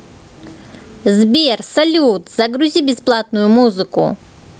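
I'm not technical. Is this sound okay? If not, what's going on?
No. The recording level was likely set far too high for the microphone, so an automatic level control keeps yanking the volume down whenever the speech gets loud, then letting it back up in the pauses. That is gain pumping, and it runs through the whole clip. You hear a large back-and-forth swing in level that leaves the speech sounding squashed and flat.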